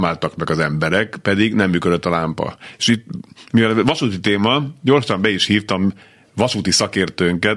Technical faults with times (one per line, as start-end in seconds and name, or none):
none